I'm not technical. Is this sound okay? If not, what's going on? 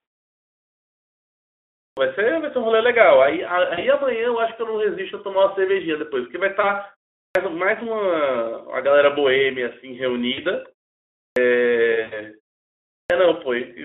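No, there are two kinds of fault in this speech recording.

The first is a clipped start after a pause. After each silence, the playback device appears to go idle and needs a moment to wake up, so roughly the first tenth of a second of the next stretch of speech is lost. Speech begins abruptly, with its opening sounds missing. This happens at 1.86, 7.24, 11.26 and 12.99 seconds. The quiet gaps themselves, which fall fully silent between phrases, are not part of the problem.

The second is VoIP packet loss concealed by the speech codec. Small chunks of the transmitted audio went missing, and the decoder filled each gap by continuing the last sound it had, letting it fade. Listen for a brief buzzy or smeared stretch where the voice weakens or distorts, at 3.73 to 3.84, 6.61 to 6.69, 10.33 to 10.41, and the longest at 12.01 to 12.28 seconds, about a tenth of a second of lost audio.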